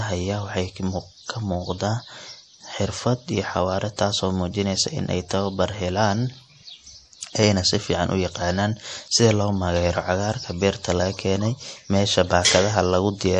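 From start to finish, the speech carries plainly audible damage, likely from MP3 compression. Nothing sounds above 11.2 kHz. Weak frequency lines drop in and out between frames, giving a watery, swirly texture. The starved bit budget fits a rate near 48 kbps.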